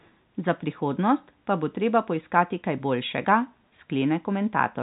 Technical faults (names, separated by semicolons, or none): echo leak